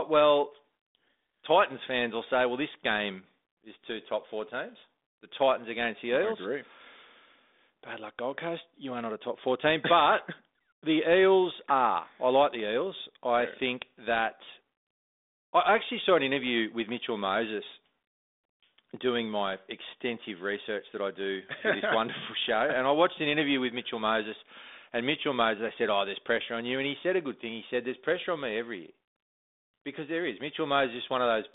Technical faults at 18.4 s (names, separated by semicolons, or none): none